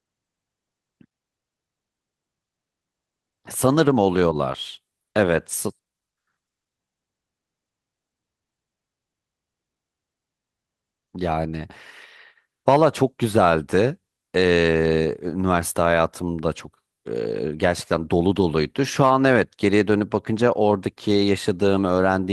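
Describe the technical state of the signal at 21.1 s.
At 21.1 s the signal is intact, with no audible fault at that moment.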